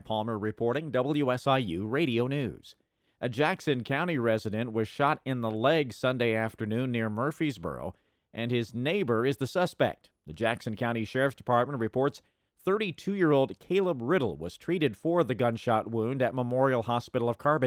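Listening to the speech recording turned up nothing that stood out as a technical problem.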